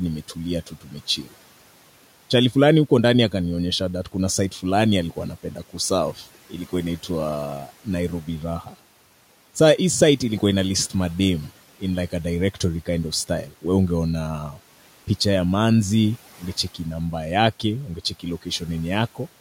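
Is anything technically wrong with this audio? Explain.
Yes, this is speech cut by the noise suppressor. It misread stretches of speech as background and turned them down: about 11 dB at 0.67 to 0.92 s, and about 9 dB after "kuna site fulani alikuwa" at 5.43 to 5.75 s and after "inaitwa nairobi" at 8.63 to 8.75 s. Each time, a brief fraction of a second sounds swallowed and faint. The room noise, about 25 dB below the speech, belongs to the recording itself.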